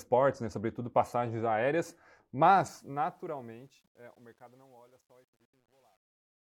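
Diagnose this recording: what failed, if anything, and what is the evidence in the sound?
Truncation distortion on a fade, introduced at the digital gain or sample-format stage. The speech fades out from about 2.56 s to 6.41 s, and from 2.56 s the decaying level turns grainy. From 3.69 s to the end it is at its worst, which fits a fade computed at about 10 bits without dither. Low-level samples collapse onto a few coarse steps. Unlike a gate or a codec dropout, the grit worsens steadily as the fade deepens.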